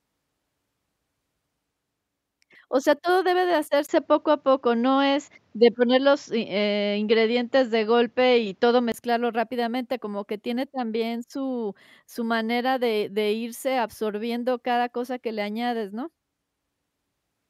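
At 3.87 s the speech turns duller and boxier after a brief gap of about 20 ms, with nothing above 7.5 kHz, a shift in level of a few decibels and a faint new background noise. The likely cause is an input switched to a poorer device, and the sound clears up again at 8.94 s. The tone, level and noise floor all change together at a gap, which separates this from a plain filter or EQ change.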